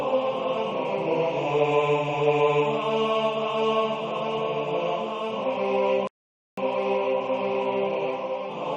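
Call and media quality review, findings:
Rebuffering stall at 6.07 s. Audio drops to silence for about 0.5 s, picks up at 6.58 s exactly where it left off. No content lost, just half a second tacked on. Points at the player/download side: buffer ran dry, playback paused until more data landed. Worth checking network throughput and buffer headroom.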